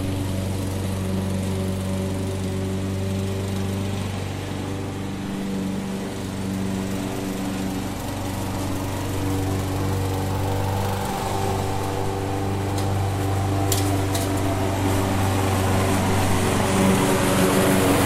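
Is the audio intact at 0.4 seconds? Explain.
Yes, the audio is intact at 0.4 s, with no dropout, click, distortion or other fault at that moment.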